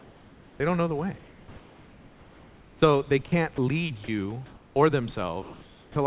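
Comfort noise in place of the background runs through this short speech recording at 0.0 to 0.6 s, 1.18 to 2.82 s (after "don't know the way"), 4.46 to 4.76 s and 5.42 to 5.96 s. The real room background, sitting about 27 to 30 dB below the loudest speech, gives way to a smooth, featureless hiss, about 2 dB quieter in the first three pauses and level in the last. The likely cause is discontinuous transmission: the sender stops sending during pauses and the receiver synthesises noise to fill them. An onset clipped by the voice detector follows two of those pauses, at about 2.8 s (20 ms lost) and at 5.91 to 5.96 s (50 ms lost). Speech bursts in without its soft start, probably because the detector reacted late and comfort noise stood in for the opening. Sound chopped by the voice detector appears between 3.26 and 3.58 s. About 80 ms in total is swapped for synthetic fill as the detector flips on and off, so the speech stutters; a detector toggling mid-phrase is the likely reason. 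Sound dropped by the voice detector occurs at 4.04 to 4.08 s, where 40 ms of speech vanishes into steady noise, most likely because the detector mistook it for background. The audio is band-limited with nothing above 4 kHz, which fits a G.711 A-law call path at 64 kbps.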